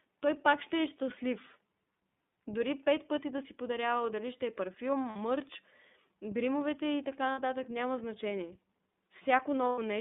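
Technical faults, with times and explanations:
throughout iLBC codec: the speech is confined to a telephone band of roughly 200 Hz to 3.6 kHz and has a plainly audible rough, synthetic edge. This fits iLBC at about 13.3 kbps with 30 ms frames, each coded independently, unlike smoother CELP-style narrowband coders.
5.10–5.17, 7.33–7.40 and 9.69–9.78 lost iLBC frames: gaps of 60, 60 and 90 ms, the first after "дали ще е парфюм" and the second between "гримовете и така" and "няма значение", become a held, buzzy vowel from the repeated last pitch cycle. The speech recovers at once, unlike codecs that smear damage forward.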